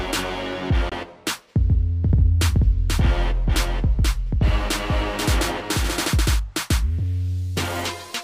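At 0.89 to 0.93 s a silent hole of about 21 ms opens, which fits one lost frame. This is likely a Bluetooth dropout: the sound resumes as if it had kept playing, with nothing delayed.

From 2.04 to 6.40 s a doubled audio track follows about half a second behind, a few dB quieter. Unlike an echo, this full-band copy has no decay or room colour and starts and stops abruptly, likely from a second, slower capture path.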